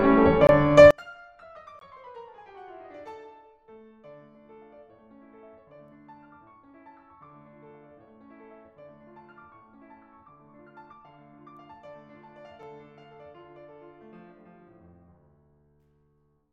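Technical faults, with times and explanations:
0.47–0.49 s, 1.79–1.81 s and 12.62 s: block of digital silence. The music drops to silence and returns with no fade. The first two gaps each last about 21 ms, long enough to hear as a brief hole; their identical length fits a 1024-sample buffer that was not filled in time. The third is about 5 ms and comes across as a tick or dip rather than silence.
0.91–16.52 s: one channel inverted. From just under a second to the end, the mono sum falls by about 34 dB. The centred body of the music nearly disappears, leaving a faint residue of whatever differs between left and right. The likely cause is one stereo channel carrying reversed polarity, so the content shared by both channels cancels when they are added together.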